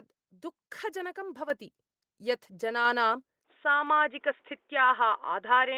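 At 1.5 s the microphone volume steps up. The level jumps by about 7 dB in a single step, with no gradual ramp. The speech and the background rise together, which marks this as a change at the input rather than the talker getting louder. The call software judged the microphone too quiet and raised the device's input volume at once.

At 3.45 s the tone changes and stays changed to the end. The band narrows from here on. The speech turns dull and boxy. There is no gap at the change, and the overall level stays about the same. A new, faint noise floor appears, far below the speech. The likely cause is the input switching to a poorer device, such as another microphone or a headset's call profile.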